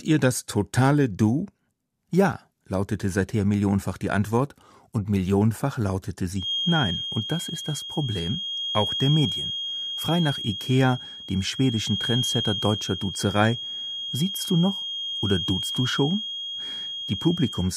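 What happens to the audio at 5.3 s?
Nothing goes wrong at 5.3 s; the speech carries on intact through that moment, with no dropout, click, distortion or other fault to be heard.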